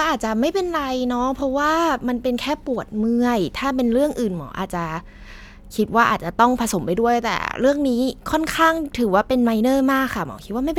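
No dropouts, clicks, distortion or other technical faults are audible anywhere in the speech.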